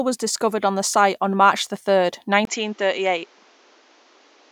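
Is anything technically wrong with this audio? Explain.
Yes. From 2.45 s, after "the third", a 20 ms gap, then nothing above 7.6 kHz and a new noise floor roughly 35 dB down, at unchanged level. The likely cause is the input switched to a poorer device. The gap and new noise rule out simple filtering.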